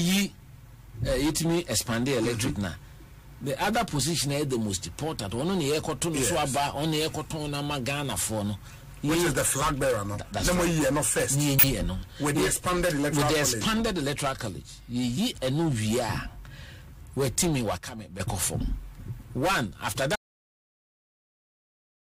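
At 7.29 s, 11.59 to 11.64 s and 16.81 to 16.85 s, compressed frames are skipped. The audio leaps ahead by roughly 20, 20 and then 70 ms, each join showing as a narrow spectrogram discontinuity. From 17.78 to 18.20 s there is a sudden gain jump of about −10 dB, likely an unramped gain change; the waveform envelope and noise floor step down together. At 20.16 s the sound cuts out in an audio dropout to silence, likely a lost input. The waveform is flat silence and the spectrogram black to the end.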